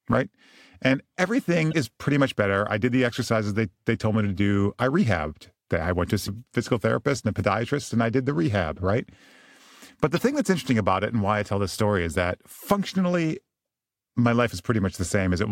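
Damaged data in a compressed stream makes the decoder misread frames and lose sync in this speech, giving short glitches at 1.69 to 1.74 s, before "pretty much better I"; at 6.23 to 6.29 s, between "rehabbed I went to" and "physical therapist and a"; and at 10.16 s, before "thing that's interesting about".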